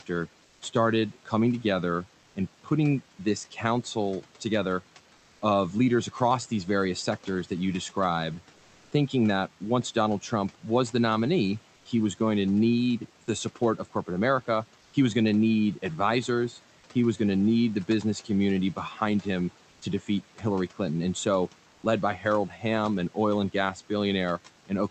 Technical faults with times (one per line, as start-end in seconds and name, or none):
0.00-24.91 noise suppressor artifacts
0.45-0.61 comfort noise in place of the background
2.21-2.35 comfort noise in place of the background
11.75-11.85 comfort noise in place of the background
19.69-19.81 comfort noise in place of the background
21.73-21.83 comfort noise in place of the background
22.49-22.63 speech cut by the noise suppressor